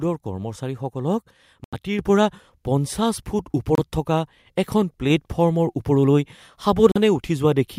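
At 1.64 s the speech cuts to silence for 85 ms and then resumes where it stopped. This is a Bluetooth stall. Radio interference likely delayed packets on the wireless link, so the headphones' buffer emptied and playback paused until the resent packets arrived. At 1.99 s the speech and the background noise both jump up by about 6 dB in a single step. That is the microphone volume being stepped up: the call software judged the input too quiet and raised the device's gain all at once. Another stall follows at 3.75 to 3.79 s, a 27 ms dropout that sounds like a brief cut to silence. At 5.10 s the level steps up again, this time by about 3 dB, lifting voice and room noise together. The last Bluetooth stall comes at 6.92 to 6.97 s, a 40 ms gap before the audio carries on.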